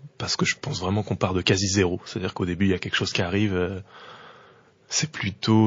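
MP3 compression runs throughout: the speech sounds watery and swirly, with metallic chirps on s sounds and dull treble. The damage is plainly audible and likely comes from MP3 encoding at a low bitrate, fitting about 32 kbps, where the encoder trims the top end and drops weak frequency lines that flicker between frames.

Pre-echo at 3.12 to 3.15 s, just after "y a quelque chose": a short hiss, about 12 dB up, leads a sharp attack by roughly 27 ms. Quantisation noise spread across a long transform block fills the quiet before the onset, fitting a 72 ms window with no short blocks.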